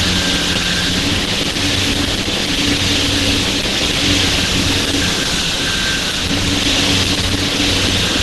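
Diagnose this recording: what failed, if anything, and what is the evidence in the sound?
The codec stage looks like the culprit: likely Opus compression throughout, with nothing above 12 kHz and a hoarse, grainy texture that fits hybrid mode at roughly 16 kbps.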